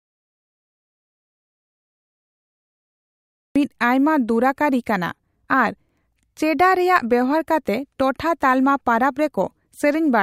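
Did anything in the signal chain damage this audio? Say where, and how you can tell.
Yes. The clip opens in an audio dropout to silence: from 0 to 3.56 s there is silence, with no room tone, before the speech arrives abruptly. The likely cause is a lost input upstream, such as a disconnected device or failed link, while the recorder kept writing silence.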